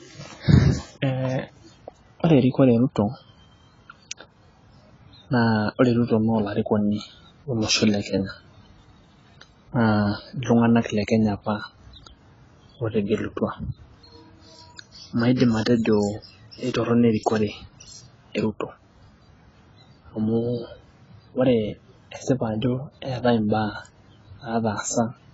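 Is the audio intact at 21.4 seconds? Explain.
No. At 21.4 seconds the speech carries AAC compression damage, as it does for the whole clip. Nothing is heard above about 7.6 kHz, so sibilants sound dull and clipped. Sustained sounds warble and fizz. The likely cause is AAC-LC coding at a very low bitrate, around 16 kbps. The encoder cuts the top band and quantises each frame coarsely against a hearing model, leaving smeared detail.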